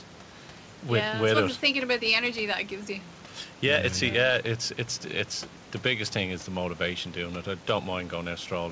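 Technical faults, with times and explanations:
Nothing here counts as a technical fault: the room noise sits about 24 dB below the speech, and the call path behaves as a 64 kbps G.722 link should, with nothing above 8 kHz.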